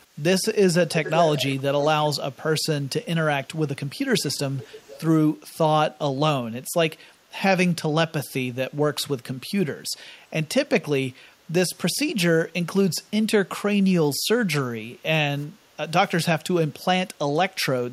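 From 1.04 to 1.56 s there's a fairly strong delayed copy of the speech, about 0.4 s behind, then fainter scraps at 4.19–4.39 and 4.58–5.01 s, likely echo leak from a far-end loudspeaker. Around 15.47–15.77 s the background gets gated by the echo canceller, dipping about 9 dB for roughly a third of a second before coming back.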